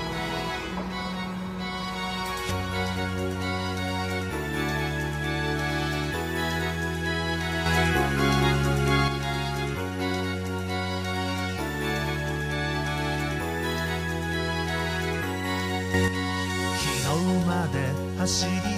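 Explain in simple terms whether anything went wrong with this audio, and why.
Yes, something went wrong: there are two sudden gain jumps. From 7.66 to 9.08 s, and again from 15.94 to 16.08 s, the whole sound abruptly gets louder, the second time more so, then drops back. The background hiss jumps with it, in the same instant. If a source had simply moved closer, only that sound would swell and the hiss would stay put. Here everything steps up at once, likely from a level setting applied with no smooth ramp.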